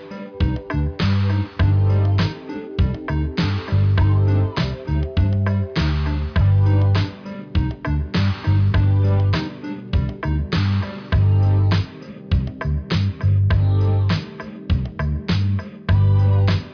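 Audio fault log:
No faults were heard anywhere in this recording.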